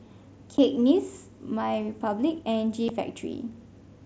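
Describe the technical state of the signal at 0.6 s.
At 0.58 s there is unconcealed Bluetooth headset packet loss: a 7.5 ms gap that fits one dropped mSBC frame. The missing block was replaced by silence or an idle pattern with nothing to smooth it, so the speech has a brief hole with abrupt edges.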